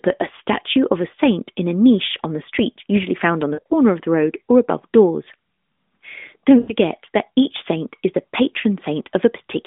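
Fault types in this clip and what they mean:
lost AMR speech frames: Corrupted radio frames fail their checks, so the decoder fills each gap by repeating the last good pitch and spectral shape while ramping the gain down. Here it happens twice. Around 3.54 to 3.73 s, scattered losses over about 160 ms, with runs of up to 60 ms, give a smeared, stretched quality that sags in level. At 6.60 to 6.72 s a shorter concealed gap of about 80 ms briefly drags and dips before the speech recovers roughened for a moment.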